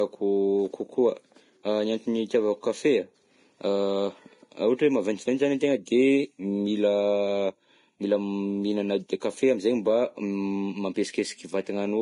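Speech whose top end stops dead at about 10.6 kHz for the whole clip, with a dull quality. This is likely low-bitrate audio saved at a high bitrate: a lossy encoding, perhaps near 30 kbit/s, stripped the highs, and re-encoding at 320 kbit/s cannot restore them.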